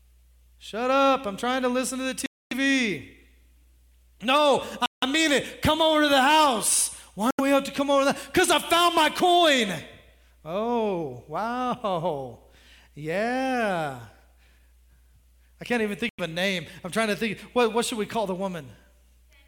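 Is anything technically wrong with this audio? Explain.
Yes. The speech drops to complete silence four times, at 2.26 to 2.53 s, 4.86 to 5.04 s, 7.31 to 7.40 s and 16.09 to 16.20 s, each gap lasting roughly 80 to 250 ms before the audio resumes. This pattern is likely a Bluetooth stall: interference delayed packets, the receiver's buffer emptied, and playback paused until retransmissions arrived.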